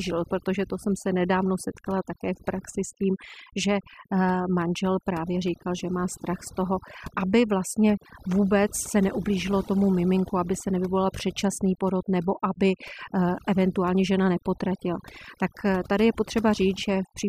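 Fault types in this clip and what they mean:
overdone noise removal: a noise reduction stage was set too aggressively, cutting individual frequency bands whenever they sank near its noise estimate. Across the whole clip the speech loses its quieter detail, and the background drops and breaks up into twinkling specks.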